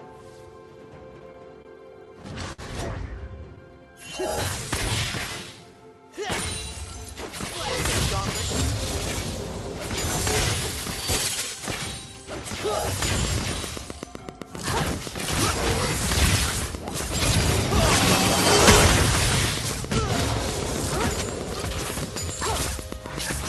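From 1.19 to 2.61 s there are repeated stalls, a stutter. Packets arrived late, so the jitter buffer ran dry seven times. The receiver held each last sound for 140 ms in total, the longest hold 59 ms. Unlike packet loss, nothing is missing. The sound simply halts and drags.

Between 3.79 and 5.75 s a jitter buffer slow-down stretches the audio to 93% speed by repeating single pitch periods, adding 147 ms. Unlike the stutter, there are no halts. Sounds are smoothly drawn out at unchanged pitch.

From 7.70 to 9.20 s the opposite happens. A jitter buffer speed-up trims short pitch-period pieces, roughly 200 ms in all, so the audio runs at 112% and sounds hurried. The pitch stays put, which separates it from a sample-rate mismatch that would raise it.

From 13.00 s to the end a train of clicks ticks at a regular 7.74 per second, peaking about 10 dB above the signal and continuing through pauses. 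Their much-alike shape and steady pace point to interference or a faulty connection or power supply as the likely source, not codec damage. The call path's roughly 12 kHz bandwidth fits Opus at 64 kbps.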